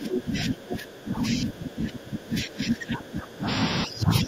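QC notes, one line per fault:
Throughout, speech suppressed in double talk: the speech keeps dipping, about 20 dB at worst, likely an echo canceller ducking everything while both sides overlap.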